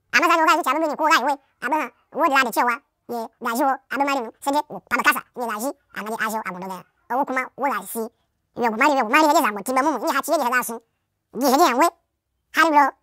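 From the first second to the last, the speech plays back at twice the intended speed and a full 12 semitones up. It's the classic audio read two samples at a time, where each pair of samples gets taken as one frame. That points to a channel-count or sample-width mismatch, and it leaves the voice chipmunk-high.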